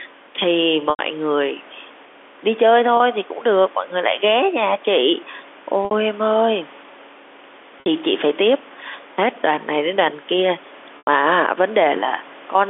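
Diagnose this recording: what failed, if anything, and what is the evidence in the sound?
At the network stage, packets went missing and the receiver hid each hole with packet loss with pitch repetition, looping the last pitch cycle and fading it out. The gaps fall at 0.9 s (90 ms), 2.97 s (30 ms), 5.85 s (60 ms), 7.8 s (60 ms) and 10.98 s (90 ms), which fits losses of one to three 30 ms packets. The 30 ms gap comes through as a brief held buzz. The longer ones fade toward silence before the speech returns with a short cross-fade.

In the capture and call-processing chain, the input gain was likely set far too high, with a fast limiter or compressor clamping every loud syllable. The result is gain pumping through the whole clip: the level swings by around 5 dB. Loud and quiet passages sit unnaturally close together, leaving the speech flattened and squashed.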